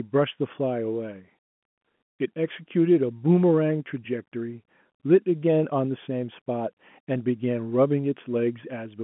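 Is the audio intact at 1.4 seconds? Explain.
Yes, the audio is intact at 1.4 seconds, with only the narrow telephone band of the G.711 line coding that runs through the whole clip.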